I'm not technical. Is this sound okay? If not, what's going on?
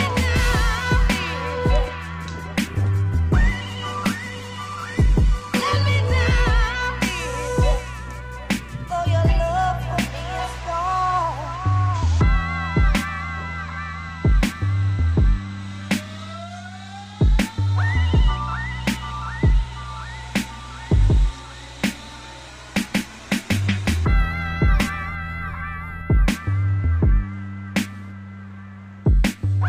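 No, not quite. There are two stretches, from 2.41 to 6.39 s and from 21.95 to 25.75 s, where a call bitrate drop happens. The connection briefly squeezed the audio into far less data, so it turns muffled, rough and a bit watery until it recovers.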